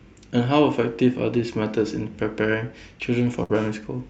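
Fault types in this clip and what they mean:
Burst of packet loss: a run of packets went missing or arrived too late at 3.43 s, so the receiver stretched the last received speech for about 59 ms while fading it down, then jumped ahead at 3.51 s, skipping 60 ms of speech.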